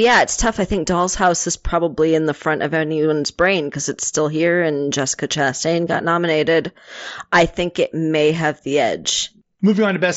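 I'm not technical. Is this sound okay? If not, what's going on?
Yes, nothing stood out when listening to this speech, which sounds like it came through a Bluetooth headset's wideband connection.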